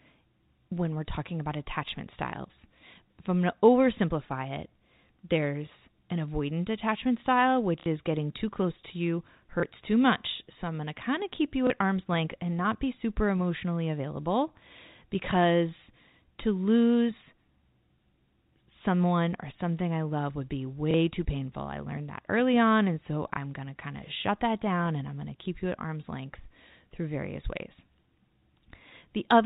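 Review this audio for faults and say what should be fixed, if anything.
Packet loss with last packet repeated shows up five times: a 60 ms stutter at 7.8 s, between "an avoidant attachment style" and "is getting too close," and 30 ms repeats at 9.6 s (after "too close to you"), 11.67 s, 20.91 s (after "I love would be") and 23.34 s. The receiver filled each gap by replaying the last packet it had, and the 30 ms blips fit 30 ms packets. The G.711 telephone coding underneath keeps everything below 4 kHz. To prevent this, give the link a larger jitter buffer or forward error correction, and swap plain repetition for proper packet loss concealment.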